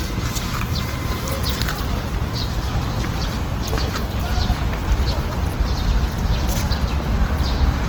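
From start to finish the audio sounds grainy and rough, with tones turning noisy rather than swirly. That's the Opus compression signature in its CELT music mode, likely from a low bitrate around 16 kbps. Starved bands get filled with folded or noise content, while the bandwidth still reaches about 20.2 kHz.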